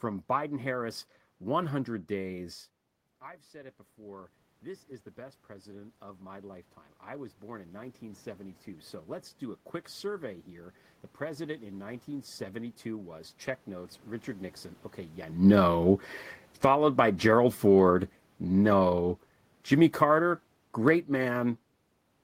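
It's a speech clip, and the main problem is automatic gain rising. Just after the talker moves away around 2.5 s, the input drops by about 17 dB. From 3.2 to 10.53 s the AGC slowly pulls the level back up by about 12 dB, so both the voice and the room noise swell together over several seconds. It climbs again from 11.21 to 14.57 s, by about 4 dB, and briefly once more from 16.82 to 17.71 s, by about 4 dB.

The opposite happens too, with automatic gain falling. Around 15 s the talker moves again, and from 15.36 to 17.96 s the AGC treats the sound as too loud and eases it down by about 5 dB, with that short rise tucked inside. It does the same again from 18.48 to 21.6 s, another drop of about 5 dB. Each time the voice and its background sink together, which tells you it's the gain control moving and not the talker.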